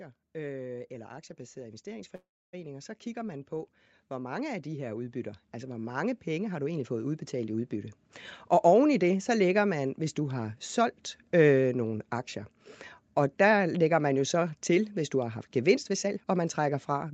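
From 0.32 s to 8.0 s there is automatic gain rising. The level climbs gradually, by about 15 dB in all. The voice and the background noise swell together. This is the gain control reacting to a quiet input. It raises its gain step by step instead of at once. So the first seconds sound low, and the room noise grows along with the speech as the gain builds.

At 2.15 s a call audio freeze interrupts the speech and lasts until 2.55 s. The last sound is carried on as a buzz or hiss that fades. Then about 290 ms of silence follow. The likely cause is packets held up in transit, so the jitter buffer ran dry. When the audio resumes, it picks up where it stopped. Nothing is lost. Instead about 376 ms of filler is inserted, and the delay grows by that amount.

From 15.74 s to 17.12 s a jitter buffer speed-up is heard. The speech runs at about 121% speed, but its pitch stays the same. It sounds clearly hurried. 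The receiver was holding more audio than it wanted. To reduce the delay it cut out many short pieces, each one or a few pitch periods long. Roughly 0.3 s of audio goes in total. The 8 kHz bandwidth of the call path stays the same through this passage.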